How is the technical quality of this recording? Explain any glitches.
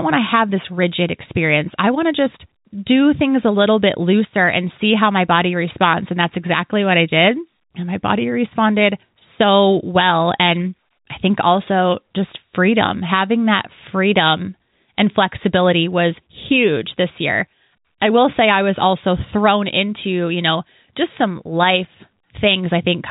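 There are no glitches to explain in this recording.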